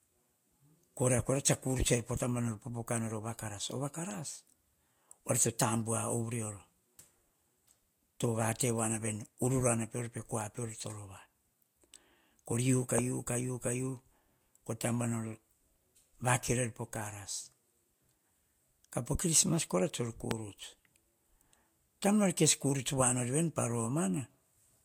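Throughout, the speech has nothing above 16.6 kHz and carries a smeared, swirly texture. This likely comes from low-bitrate audio saved at a high bitrate, with the damage from the first encoding kept intact.

At 12.98 s and again at 20.31 s, a single loud pop lasts about 20 ms, peaking roughly 20 dB above the speech. A voltage spike from a switch or plug is the likely cause.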